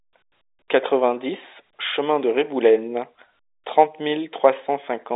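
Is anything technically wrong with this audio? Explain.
No, nothing is technically wrong with this audio.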